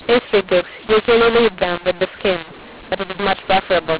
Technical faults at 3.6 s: mu-law and A-law mixed up

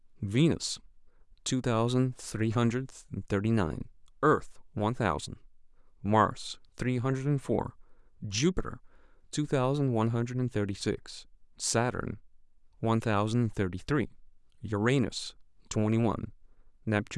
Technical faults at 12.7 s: none

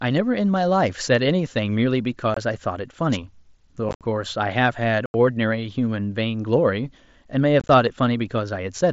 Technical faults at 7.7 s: unconcealed Bluetooth headset packet loss

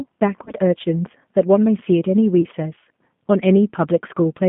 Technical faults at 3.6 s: G.729 codec

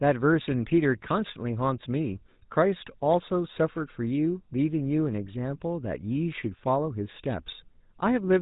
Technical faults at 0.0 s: GSM full-rate codec

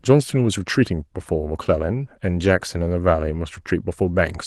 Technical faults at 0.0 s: none

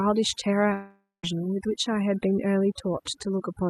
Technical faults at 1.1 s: overdone noise removal; long network dropout

